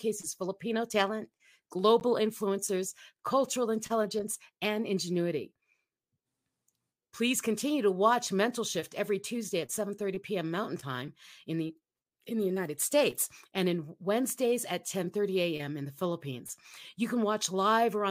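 A speech clip, broken once by a short, hard-edged dropout of silence at about 2.00 s, lasting roughly 11 ms, just before "influencers cultural intelligence and". The sound stops abruptly and resumes without any fade, giving a tiny click-like hole rather than a smeared glitch. This is a gap between stream segments: the timestamps of two consecutive segments leave about 11 ms uncovered, and the player pads it with silence. Its position fits a segment boundary in a stream cut into 4-second pieces. Nothing is missing from the speech itself; the gap only inserts time.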